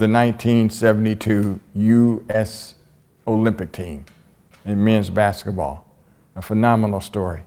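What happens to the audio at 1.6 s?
Nothing goes wrong at 1.6 s: the speech carries straight through that moment with no dropout, click or other fault.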